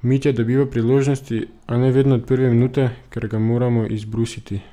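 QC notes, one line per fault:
Nothing to flag here, the speech comes through without any trouble at all.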